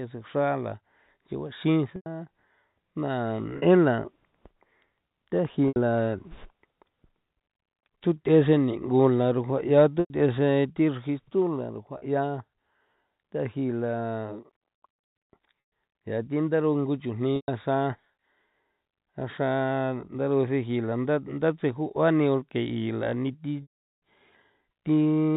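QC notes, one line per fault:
1.96, 3.58, 5.68, 10.0, 11.98, 15.66, 17.36 and 23.62 s: packet loss with pitch repetition. Gaps run 40 to 120 ms, and 400 ms at 23.62 s. The receiver repeats the last pitch period. Short gaps sound like a held, buzzy tone. The long gap fades to silence, then cross-fades back.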